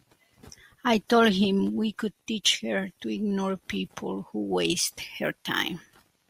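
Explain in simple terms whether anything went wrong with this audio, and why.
From 4.93 s to the end, a crude rate conversion copied samples instead of smoothing them, likely from 32 to 48 kHz, adding a gritty, buzzy fizz to the speech.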